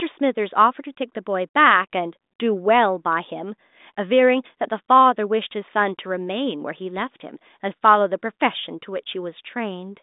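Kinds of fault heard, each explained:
Nothing to flag here, just telephone-band speech topping out around 3.8 kHz with no faults to pick out.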